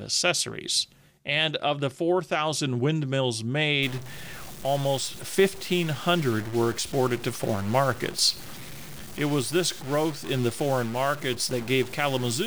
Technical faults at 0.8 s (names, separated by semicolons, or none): none